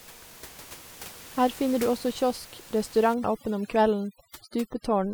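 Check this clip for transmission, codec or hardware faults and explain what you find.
One processing fault appears, running from 3.14 s to the end of the clip at 5.14 s: overdone noise removal. A noise reducer set too aggressively gates individual frequency bands whenever they sit near its noise estimate. The quieter parts of the speech get suppressed with the noise. The background drops and breaks up into twinkling specks. Before 3.14 s, the room noise sits about 20 dB below the speech.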